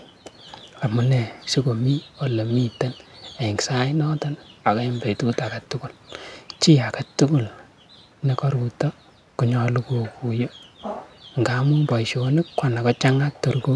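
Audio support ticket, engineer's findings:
No audible fault found on the speech recording; nothing to trace to any component in the playback or capture path.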